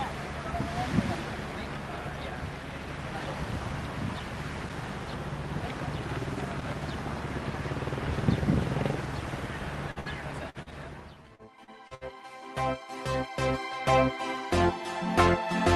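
At 9.91 to 9.99 s comes a short concealed packet loss: about 40 ms of audio never arrived in time, and the receiver papered over it by extending the preceding sound, about 43 ms of fill, before blending back in. It registers as a quick smear or wobble rather than a gap. Unlike a burst, the patch is brief enough that nothing audibly fades, though a very short sound inside it can simply disappear.

Right behind it, from 10.00 to 10.09 s, is a burst of packet loss, with about 58 ms concealed. Here the stretched sound is held long enough to fade, as a dwindling buzz or hiss. The audio then picks up further on with a chunk missing, and the receiver adds about 18 ms of delay as it recovers. A second burst at 10.50 to 10.57 s, about 49 ms, repeats that held-then-fading character, which the shorter patches lack.

Another short concealed packet loss follows at 10.62 to 10.69 s, about 38 ms, again a momentary smear or wobble with no fade.

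From 11.14 to 11.47 s a jitter buffer slow-down stretches the audio. Single pitch cycles and slivers of pause are repeated to rebuild the buffer's reserve, adding about 51 ms, so playback runs at about 87% speed with the pitch unchanged. Sounds seem drawn out, perhaps with a faint warble, but nothing is lost. That separates it from concealment, which fills holes where audio is missing.

Overlapping its end, 11.35 to 12.04 s brings repeated packet loss with robotic sound. Four gaps close together, the longest 61 ms, leave about a quarter of the stretch concealed. The result is choppy rather than a single smear, because each patch is followed soon after by the next. All of this rides on the Opus call path at about 32 kbps, whose top end stops around 12 kHz.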